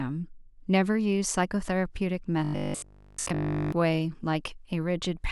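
From 2.44 to 3.72 s the speech goes to a robotic sound, a rigid 50 Hz metallic buzz, likely from a 20 ms buffer being repeated nearly continuously.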